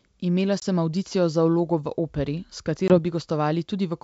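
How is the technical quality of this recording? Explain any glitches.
Two brief, hard-edged dropouts interrupt the speech, heard over clean wideband telephone audio consistent with G.722 at 64 kbit/s. At 0.60–0.64 s and 2.88–2.99 s, silence cuts in and the speech resumes unsteady and slightly distorted. This is packet loss on an ADPCM call: about one 20 ms packet goes missing each time, and the decoder's predictor and step size need a moment to fall back into step with the sender's.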